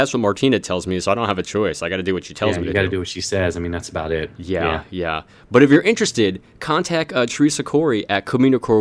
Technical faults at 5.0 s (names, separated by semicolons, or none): none